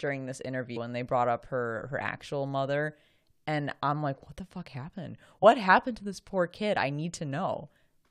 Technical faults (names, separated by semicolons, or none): damaged data in a compressed stream